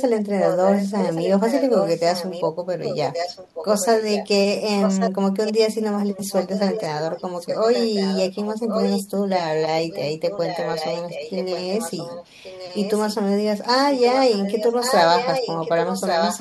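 Echo leak runs through the speech at 0.0–2.48 s, 2.83–4.28 s, 4.8–5.11 s, 5.45–9.04 s, 9.9–13.13 s and 14.05–16.39 s. A copy of the voice trails 1.13 s behind, roughly 5 to 10 dB quieter. It is likely loudspeaker pickup that an echo canceller failed to remove.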